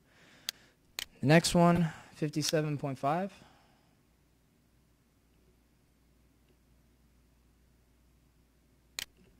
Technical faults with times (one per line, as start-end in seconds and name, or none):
1.75-1.79 corrupt frame decoded
3.29-3.32 corrupt frame decoded
5.89 corrupt frame decoded